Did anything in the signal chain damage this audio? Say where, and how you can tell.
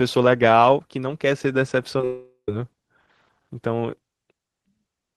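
Yes, at the network stage. Short concealed packet loss appears at 1.98 s and again from 2.01 to 2.04 s, each gap about 10 ms of missing audio. The receiver's concealment patched each hole by extending the preceding sound and crossfading back, so it is heard as a brief smear or wobble. On a spectrogram the sound stretches unnaturally flat for a few milliseconds. The waveform shows the preceding sound continued, then blending back into the real audio.

Immediately after, from 2.05 to 2.49 s, comes a long network dropout, likely a burst of packets that never arrived. About 0.43 s of audio is lost. The receiver keeps extending the last sound as a decaying buzz or hiss, which ends in roughly 80 ms of silence before the audio resumes further on. On a spectrogram this is a smeared, fading band followed by a blank gap. The waveform shows a shrinking envelope, then a flat line.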